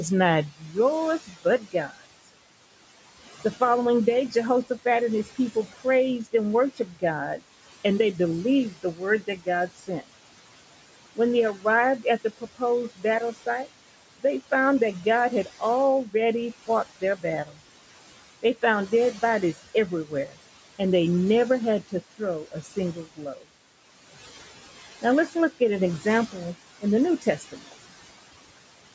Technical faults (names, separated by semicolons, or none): noise suppressor artifacts; speech cut by the noise suppressor